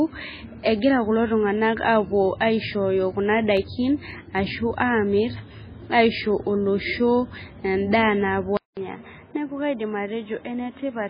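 Across the whole clip the speech has a watery, swirling quality, and nothing survives above 5 kHz. That is likely heavy MP3 compression, which fits a very low bitrate around 16 kbps. On a spectrogram the top is sharply cut flat, and the content below it breaks into patchy blocks that flicker on and off.

Between 3.57 and 4.38 s there are four CD scratch ticks, small clicks where damaged data could not be rebuilt and the player patched over the gap. The longest lasts about a millisecond. They show as thin vertical lines on a spectrogram and as tiny glitches in the waveform.

At 8.57 s the sound drops out for 200 ms. It then returns duller and about 5 dB quieter, with nothing above 3.8 kHz and a new noise floor roughly 30 dB below the speech. This points to an input switched to a poorer device. The spectrogram shows a gap, then a lower ceiling and a grey noise wash.

From 8.74 to 8.77 s, a 29 ms pre-echo precedes an attack. 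The codec spread the noise meant for the loud onset back into the quiet moment before it. It is heard as a brief hiss before a softened attack, and it shows as a faint smear just ahead of the onset.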